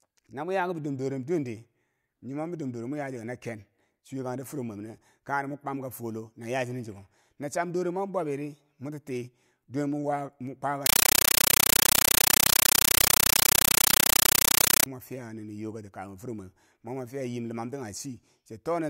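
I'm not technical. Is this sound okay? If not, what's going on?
No. From 10.86 to 14.86 s the speech is replaced by very loud, chattering static until "fiya nini yokati kabum". This is a compressed stream played as audio. Undecoded surround-format data, which is Dolby Digital, is played as sound. Unlike random hiss, it pulses steadily 31 times a second.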